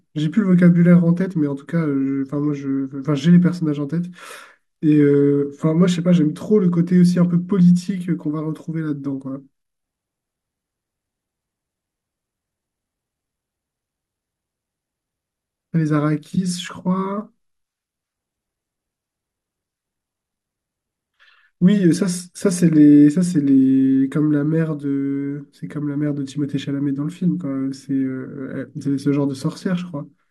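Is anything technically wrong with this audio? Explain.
No, nothing in this speech recording stood out as a technical problem on listening.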